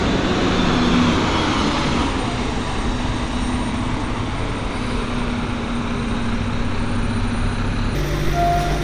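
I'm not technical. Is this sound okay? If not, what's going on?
No. From 7.95 s to the end, at 8.84 s, the sound has a wrong sample rate fault. It suddenly plays faster and higher, like a tape sped up. Speed rises about 1.45 times, and pitch jumps by about six and a half semitones. This happens when audio is played back faster than it was recorded, with no correction. The change fits audio made at 22 kHz being played at 32 kHz.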